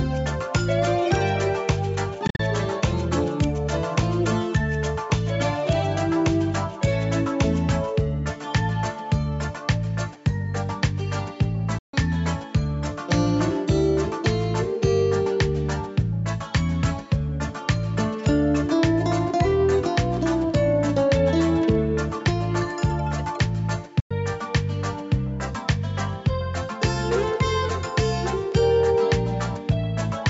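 Brief holes of silence cut into the sound at 2.27 to 2.40 s, 11.78 to 11.94 s and 24.00 to 24.11 s, the first broken into short gaps, and the sound resumes as if it had played on: likely a Bluetooth dropout, with late packets discarded.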